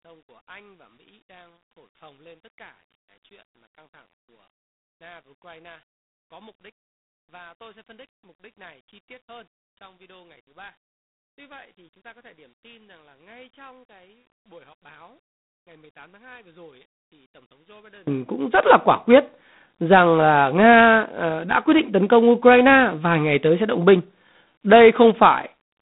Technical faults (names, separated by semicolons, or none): G.726 ADPCM; one channel inverted